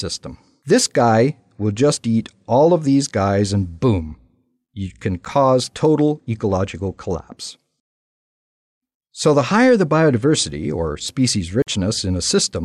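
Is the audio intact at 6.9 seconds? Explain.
Yes, at 6.9 seconds the audio is intact, with no dropout, glitch or other fault at that moment.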